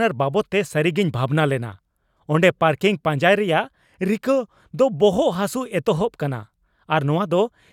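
Nothing in the recording trips an alarm, since there are no dropouts, clicks, glitches or other technical hiccups to point to anywhere along the way.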